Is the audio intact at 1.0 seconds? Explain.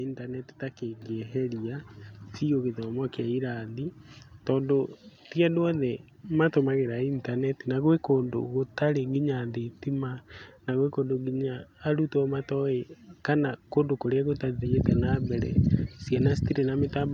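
No. At 1.02 s, just after "intaneti ta", there is a microphone volume stepped up fault. The call software judged the input too quiet and raised the device's microphone level in a single jump of about 5 dB. The speech and the background noise get louder together and stay there. Because the change happens in one step rather than as a smooth ramp, it differs from an automatic gain control easing the level up, and from a talker simply moving closer.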